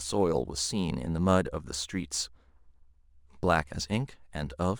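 Throughout the speech, sample clock jitter of a couple of microseconds shifts each sample slightly off time. The error, roughly 30 dB below the signal, adds a grainy hiss that thickens on loud, bright sounds and vanishes in pauses.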